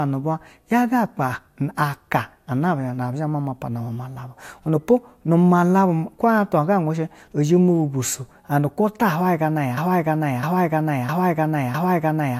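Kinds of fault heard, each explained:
Broken-record loop: From about 9.77 s to the very end of the speech, a single fragment roughly 0.66 s long plays four times in a row, each repeat identical and butted directly against the last, so the talker seems stuck. The likely cause is a player, encoder or stream that stalled and kept re-sending the last chunk it held, meaning whatever was said after 9.77 s never comes through.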